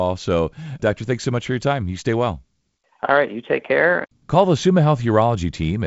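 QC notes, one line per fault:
No faults to note; the speech carries the light band-limited character of G.722 wideband telephone coding, with nothing above about 7.7 kHz.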